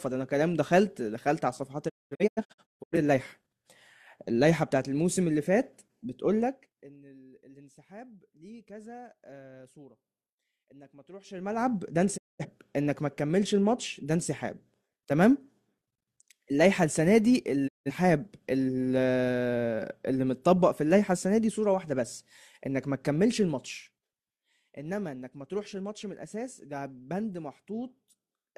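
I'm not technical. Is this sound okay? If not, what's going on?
No, there are two problems here.

The first is a digital broadcast dropout. The receiver lost good data and briefly muted, so the speech drops out with a very quick fade and then comes back. Between 1.88 and 2.97 s there's a cluster of short holes, the longest about a fifth of a second. Single gaps follow at 12.16 to 12.45 s and 17.67 to 17.91 s. Whatever was said in those gaps is simply gone.

The second is zipper noise. Someone changed the volume in lots of tiny jumps, roughly fifty a second, instead of one smooth move, and each jump leaves a faint click. You hear a ticking, zippy texture while the level moves. It happens at 6.40 to 6.98 s as the sound is pulled down a long way, at 11.22 to 11.69 s as it's brought back up, and again at 23.28 to 24.45 s during a smaller dip.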